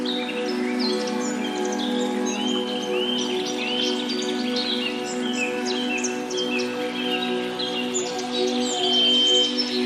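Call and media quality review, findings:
Loudspeaker feedback squeal, 8.52 to 9.70 s. Steady 3.1 kHz tone swelling over about half a second, ending a few dB above the audio. Mic-speaker loop gain exceeding unity.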